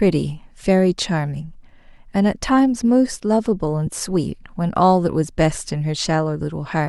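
A speech recording with two brief dropouts from lost LE Audio frames, at 0.62 s and 3.87 s. The first gap is about 15 ms, which fits two 7.5 ms frames, and the second about 7.5 ms, which fits one. The LC3 decoder filled each gap by repeating the previous spectrum with randomised phase signs, so voiced harmonics briefly turn into a noisy smear. On a spectrogram this appears as short vertical bands where the harmonic lines blur into broadband noise. The waveform shows a change in texture, not a gap of silence.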